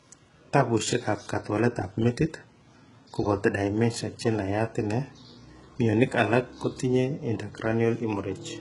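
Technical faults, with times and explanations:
Throughout: HE-AAC compression. The speech has nothing above 11.1 kHz, and the treble below that edge sounds synthetic: s sounds come out gritty and lispy, with a metallic sheen where the harmonics fail to line up with the lower band. The likely cause is spectral band replication: only the lower spectrum is coded, and the top is rebuilt by copying lower bands upward under a coarse envelope. The heavy damage fits a very low bitrate, around 12 kbps.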